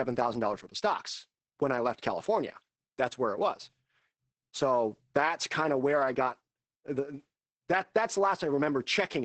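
Throughout this speech clip the sound is muffled, hoarse and faintly robotic, with nothing above about 8.7 kHz. That is heavy Opus voice compression: the SILK coder limits the band to wideband and codes the excitation coarsely, which fits a bitrate near 10 kbps.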